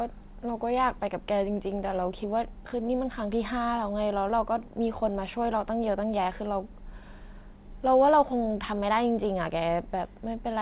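Nothing is technically wrong with this speech recording, which arrives through a G.711 A-law call path that carries no sound above 4 kHz.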